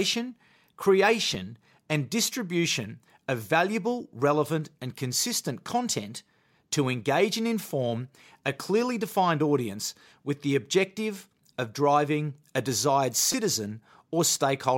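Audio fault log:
1.35 s, repeated buffer: just before "and distribution of valuable", a 5.8 ms piece of speech plays twice with a hard join. Fresh audio missed its deadline, so the device replayed its last buffer, and the block length fits a 256-sample buffer. A piece this short registers as a click or brief buzz.
13.32 s, repeated buffer: after "of driving a desired", the same 5.8 ms piece sounds four times in a row. Nothing appears to be dropped in either case. The repeats delay the audio that follows.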